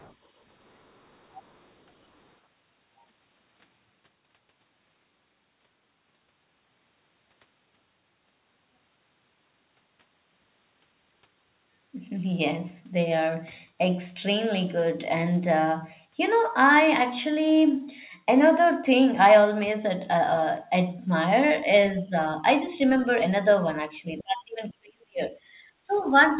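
It's a speech clip with faint other-side voice leaking through, most likely residual echo the canceller didn't fully remove, at 0.0–0.15 s, 0.65–1.71 s, 22.86–23.15 s, 24.18–24.23 s and 25.97–26.03 s, sitting roughly 25 to 40 dB under the talker. You'll also hear speech suppressed in double talk, likely the canceller ducking everything while both sides overlap: a dip of about 10 dB at 21.93–22.14 s, a deep one of about 40 dB lasting a full second from 24.22 to 25.22 s, and about 15 dB at 25.8–26.02 s. The call path's narrowband sound, with nothing above 4 kHz, fits G.711 mu-law at 64 kbps.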